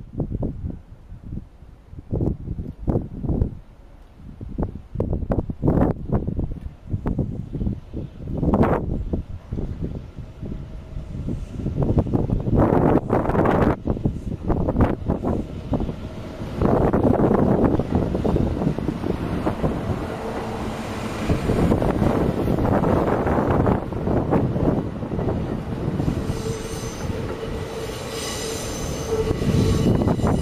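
A doubled audio track runs from 11.56 to 13.32 s: a second full-band copy of the sound trails about half a second behind, roughly 10 dB quieter, with no decay or room colour, and cuts in and out abruptly, likely from a slower second capture path.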